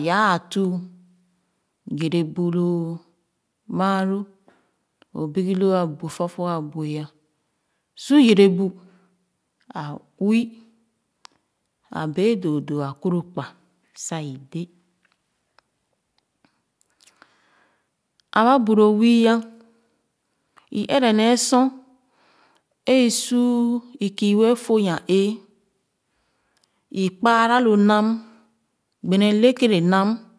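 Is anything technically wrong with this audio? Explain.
No, nothing stood out as technically wrong when listening to this speech recording.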